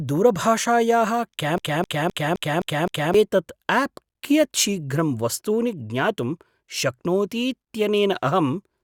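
At 1.58 s the speech catches on a short fragment and starts a broken-record loop. A slice about 0.26 s long plays six times back to back, each repeat identical to the last. The stutter runs until 3.14 s, when normal playback resumes. Whatever should have been heard in that stretch never arrives; it is simply missing. The likely cause is a stalled player, encoder or stream that kept resending the last piece it held.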